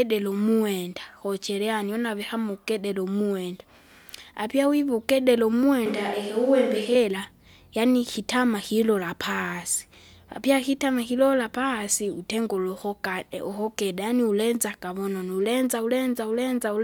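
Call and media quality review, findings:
Switch to a distant microphone, 5.86 to 6.95 s. Speech turns roomy and hollow abruptly, bass thins, level roughly unchanged, noise floor rises to around 30 dB below speech. Likely close-mic dropout with fallback to a far pickup. Spectrogram: weaker low band, reverb smear between syllables, lifted noise floor, hard edges at both transitions. Waveform: softer envelope decays, similar peaks.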